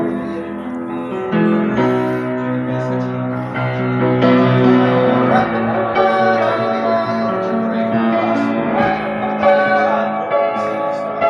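No technical fault can be heard anywhere in the audio, with the signal holding steady and continuous throughout.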